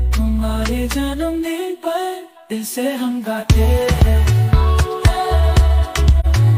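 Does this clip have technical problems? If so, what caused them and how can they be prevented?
Yes. At 6.20 to 6.26 s there is a brief soft-edged dropout, an AAC frame loss with muting. The gap lasts roughly 40 ms, which fits one lost AAC frame of about 43 ms. The decoder filled the missing frame with a zeroed spectrum, and the overlapping transform windows faded the audio out and back in around the hole, so it sounds like a short dip. Prevention: use a transport with retransmission or forward error correction so frames are not lost.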